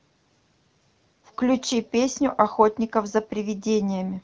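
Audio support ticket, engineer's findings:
Nothing to flag on this one: the speech just carries the light, band-limited character you'd expect from an AMR wideband (HD Voice) path at a mid rate like 12.65 kbit/s, and that's the link doing its normal job.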